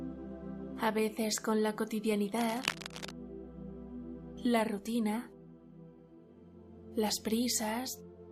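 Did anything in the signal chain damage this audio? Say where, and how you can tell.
Yes: from 2.40 to 3.14 s, dense, uneven scratching rustles over the sound. This cable scratch noise likely comes from a worn analogue connector whose contact resistance flickers.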